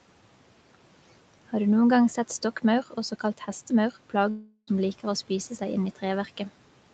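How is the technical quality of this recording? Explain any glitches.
One real glitch in this speech clip. From 4.29 to 4.69 s there's a long network dropout, likely lost packets: the receiver stretches the last sound into a fading buzz for about 0.38 s, goes silent for 40 ms, then resumes with that stretch missing.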